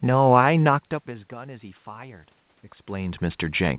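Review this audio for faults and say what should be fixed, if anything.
Nothing to fix: the speech band stops at 4 kHz as expected for a G.711 call path, the room noise belongs to the recording, and the level shifts around 0.5 s and 2.5 s come from the talker moving relative to the microphone.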